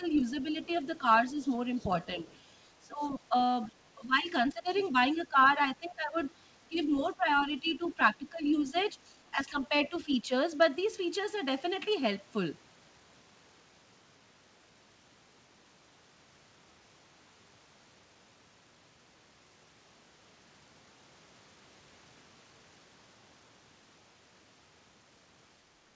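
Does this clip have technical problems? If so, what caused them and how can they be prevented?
Yes. In the first 10.3 seconds, the echo canceller likely could not tell the near talker from the loudspeaker echo while both sides spoke, so it pulled down everything. This is speech suppressed in double talk: the voice dips by around 15 dB at worst, in patches adding up to about three seconds. Using an echo canceller with better double-talk detection, or a headset, would prevent it.

The far-end voice leaks through from 0.15 to 3.68 s, 4.7 to 5.2 s and 6.25 to 8.85 s, likely because the canceller left some loudspeaker sound in the microphone signal. It sits about 30, 20 and 25 dB below the main speech. Headphones or a better-converged echo canceller would stop this leakage.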